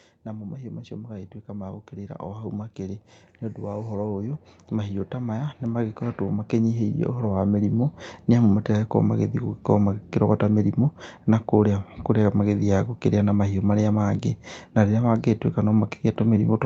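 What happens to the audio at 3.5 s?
At 3.5 s the automatic gain control is partway through an automatic gain rising that runs from 0.25 to 8.58 s, lifting its gain by about 17 dB after judging the input too quiet. The speech and its background swell upward together throughout that span.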